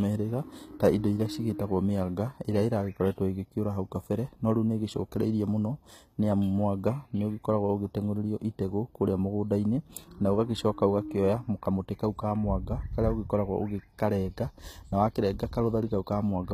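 A speech recording whose upper range sounds gritty and metallic throughout, with s sounds turning lispy and nothing above about 14.9 kHz. This is likely HE-AAC compression at a low bitrate near 20 kbps, where the treble is rebuilt from copied lower bands that fail to match the original harmonics.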